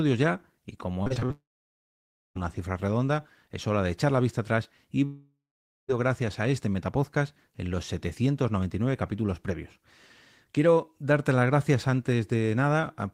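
Repeated packet loss (robotic sound) runs from 1.03 to 1.31 s, just after "ya y". Five short gaps, the longest 39 ms, are each patched by stretching the preceding sound, so nearly half of this stretch is filler and the speech turns choppy.

A long network dropout follows directly, from 1.31 to 2.37 s. About 1.04 s of audio is lost: a brief fading buzz of continued sound gives way to roughly 0.93 s of silence, and speech resumes at "una cifra redonda es" with the missing part simply gone. The likely cause is audio never arriving over the network.

Another long network dropout spans 5.05 to 5.90 s, after "la vista atrás y". Around 0.84 s is missing; the last sound is drawn out and fades, leaving about 0.52 s of silence before "gracias a este metapodcast" cuts back in.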